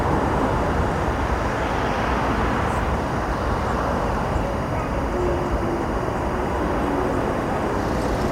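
From start to finish, timecode bleed runs behind the sound: linear timecode from a neighbouring track or cable has leaked into the audio path. The code's square wave flips between tones near 1 kHz and 2 kHz, clocked at 23.976 frames per second, giving a steady chirping warble sitting around 20 dB below the wanted signal. On a spectrogram it shows as two unbroken horizontal bands at those frequencies with a fine, regular texture, while the waveform carries a constant low-level fuzz even between events.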